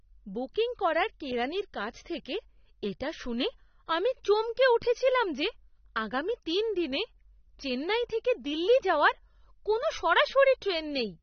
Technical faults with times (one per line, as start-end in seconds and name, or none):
0.00-11.23 AAC compression